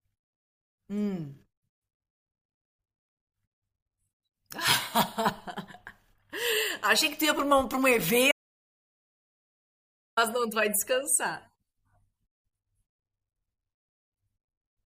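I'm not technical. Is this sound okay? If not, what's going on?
No. At 8.32 s the speech suddenly stops and total silence replaces it until 10.17 s, nearly two seconds lost. This audio dropout to silence, likely a lost input connection, differs from a pause because even background hiss vanishes.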